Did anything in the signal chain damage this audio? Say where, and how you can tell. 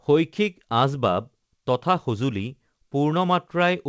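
No, nothing in the chain damaged this speech: it arrives through a normally working WebRTC call path whose wideband coding leaves no content above 8 kHz, which fits G.722 at 64 kbps.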